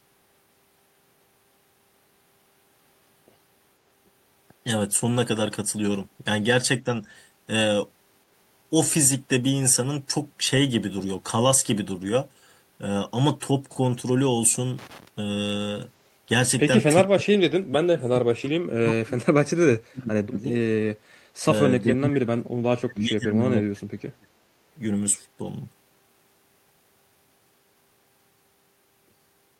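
At 14.79 to 15.08 s there's a burst of loose connector crackle: a dirty or worn contact making and breaking, so the signal gets chopped into scratchy crackle.

Then the speech keeps ducking, by about 25 to 40 dB, at 17.09 to 19.14 s, 19.31 to 20.5 s, 21.41 to 21.52 s and 21.82 to 24.31 s. That's likely speech suppressed in double talk, with the echo canceller clamping down while both ends talked.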